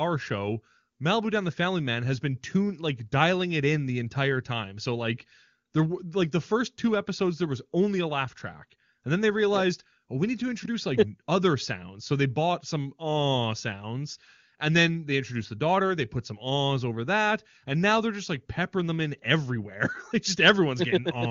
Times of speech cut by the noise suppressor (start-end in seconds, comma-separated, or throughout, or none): none